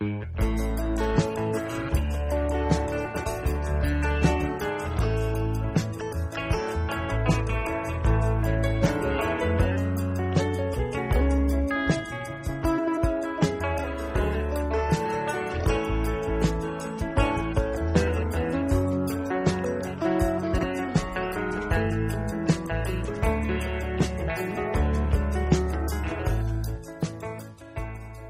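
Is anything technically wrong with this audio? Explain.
Yes. Frames out of order at 3.05–3.25 s, 12.78–12.98 s and 20.53–20.64 s: adjacent blocks of about 93 ms (46 ms in the last) swap places, producing brief garbled flutter, though no time is lost.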